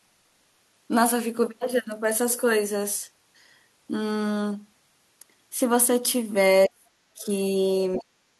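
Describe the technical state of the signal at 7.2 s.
At 7.2 s the speech is being suppressed in double talk, in a span from 6.67 to 7.28 s. The level sinks very deep, about 40 dB at its lowest, over roughly half a second. This is likely the echo canceller turning the talker down because it cannot separate them from the loudspeaker echo while both sides speak.

Within that dip, from 7.22 to 7.26 s, the other side's voice leaks through as a brief scrap far below the speech level. The likely cause is that the canceller left part of the loudspeaker signal in the microphone feed. It is a different voice, not a delayed copy of the talker as in room echo.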